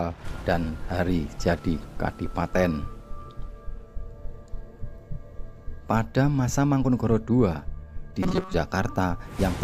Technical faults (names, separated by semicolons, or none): robotic sound from repeated short buffers